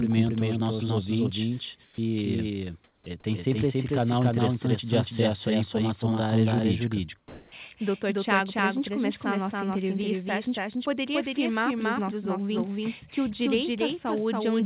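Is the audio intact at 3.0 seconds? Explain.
No. From 2.84 to 3.06 s the real background is replaced by comfort noise: a steady, featureless hiss about 6 dB quieter, likely synthesised by the receiver while the sender paused transmission. Unlike a dropout, the gap isn't silent, and unlike added noise, the original background detail disappears rather than being masked.

A doubled audio track also runs through this moment. A full-band copy, about as loud as the original, trails by roughly 0.3 s, likely from a second, slower capture path. It has no decay or room colour, which distinguishes it from a reverberant echo.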